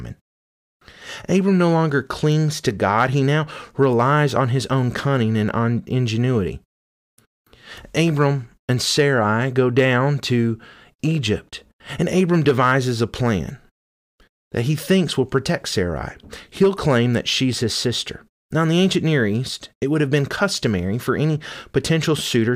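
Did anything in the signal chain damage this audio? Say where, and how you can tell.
Yes, there are two bit error spikes in this speech. One lands at 2.32 s, right after "no longer", and the other at 3.93 s, after "he now" and before "on his own cunning". Each is a lone sharp tick, a single sample peaking at about -20 dBFS, broadband and unrelated to the speech around it. That points to the digital side, in memory, storage or a link, where one flipped bit throws a sample's value off by a power of two for an instant before it snaps back.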